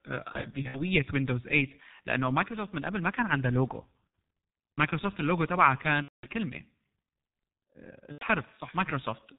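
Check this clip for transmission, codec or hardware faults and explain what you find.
Two faults are present: a low-rate speech codec across the whole clip, and four bursts of lost packets masked by that codec.

G.723.1 codec, throughout: the speech sounds muffled and hoarse, with smeared consonants and nothing above 4 kHz. The damage is heavy, which fits a G.723.1 stream near 6 kbit/s. Its 30 ms frames and slowly updated voice model cannot follow quick changes in the speech.

VoIP packet loss concealed by the speech codec, at 0.32–0.82 s, 4.08 s, 6.02–6.27 s and 8.12–8.25 s: the speech briefly turns into a stretched, buzzy tone or coloured noise that fades. The decoder fills each gap by repeating its last pitch and filter settings at falling gain. The first episode is scattered, with about 180 ms lost across 420 ms and no single gap longer than 60 ms. The others are about 60, 210 and 90 ms.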